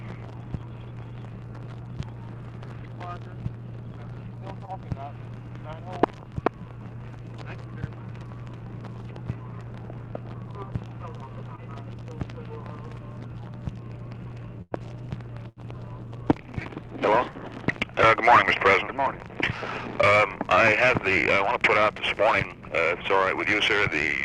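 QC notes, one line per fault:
4.65–4.70 s and 11.56–11.60 s: short concealed packet loss. About 20 ms of audio never arrived in time at either point. The receiver extended the preceding sound to fill the hole, then blended back in. Each gap sounds like a brief smear or wobble.
14.62–14.73 s and 15.49–15.58 s: burst of packet loss. About 100 ms and then 80 ms went missing. The receiver held the last sound and let it fade, producing a short buzz or hiss. The audio then jumps ahead, with that stretch lost.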